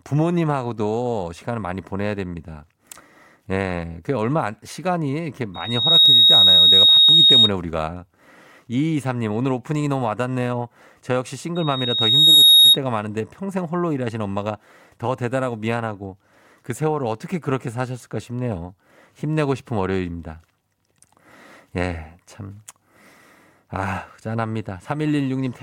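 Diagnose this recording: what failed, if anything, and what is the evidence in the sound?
Loudspeaker feedback squeal in the analogue stage, where the microphone picks up its own loudspeaker. A 3.8 kHz tone swells from 5.54 to 7.51 s and from 11.55 to 12.78 s, building over about 0.4 s and 0.7 s respectively, standing roughly 15 dB above the speech. Loop gain there exceeds one.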